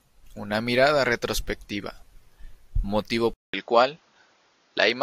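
At 3.34 s the speech drops out for 200 ms, then returns duller, with nothing above 7 kHz, a faint new noise floor and a slight level shift. The input likely switched to a poorer device.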